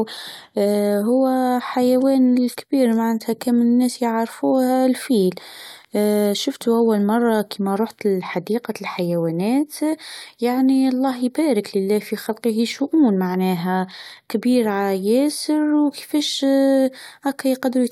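No technical faults can be heard anywhere in the recording.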